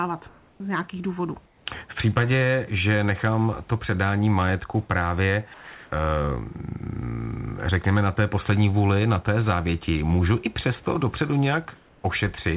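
Speech over a narrowband call path, with nothing above 4 kHz, which fits G.711 A-law. Room noise sits about 34 dB below the speech. The fault is comfort noise in place of the background, twice. From 0.28 to 0.6 s, before "z nějakých důvodů", the quiet room tone turns into a flat, featureless hiss about 2 dB louder. From 1.46 to 1.66 s, right after those words, it happens again, about 3 dB quieter. The likely cause is discontinuous transmission. The sender stops during pauses, and the receiver fills each gap with synthetic noise. Sound dropped by the voice detector follows at 5.54 to 5.92 s, just after "to předání majetku právě". About 210 ms of real sound vanishes under steady noise. The detector likely mistook part of the speech for background and stopped sending until it triggered again.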